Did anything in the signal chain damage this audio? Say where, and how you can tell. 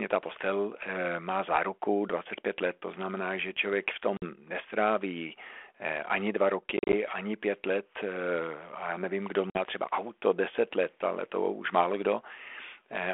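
Yes, at the network stage. Hard-edged silent gaps cut the speech at 4.17–4.23 s after "znamená že člověk v", 6.77–6.94 s before "ani pět let", and 9.50–9.61 s before "třeba auto deset let". Each return comes back slightly distorted. This is packet loss on an ADPCM call. About 50 ms went missing in the first and last gaps, and 100 ms in bursts of up to 40 ms in the middle one. The G.726 decoder's predictor and step size then resume out of step with the sender's.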